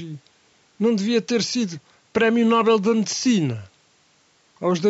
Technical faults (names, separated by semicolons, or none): none